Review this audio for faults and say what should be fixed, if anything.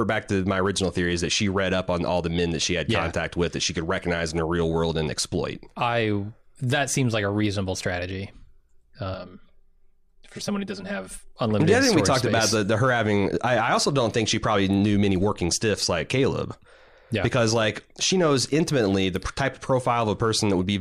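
From about 9.14 to 11.28 s the speech turns hollow and phasey, which is channel delay (comb filtering). One channel is running around 5 ms behind the other, and when the two are folded to mono, everything they share cancels at evenly spaced frequencies, starting near 100 Hz and repeating up the spectrum as fixed notches. To prevent it, keep both channels time-aligned through the chain and check the mono fold-down before export.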